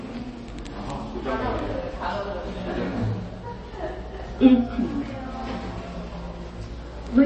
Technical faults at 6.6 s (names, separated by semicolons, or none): MP3 compression